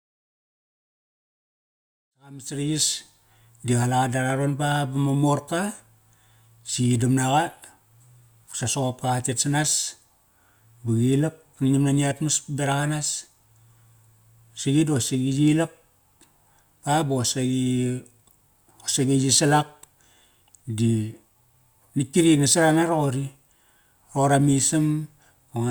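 No faults to report in this speech: the level eases up from around 2 s to full by about 3.25 s, a deliberate editorial fade-in with no click or hard edge.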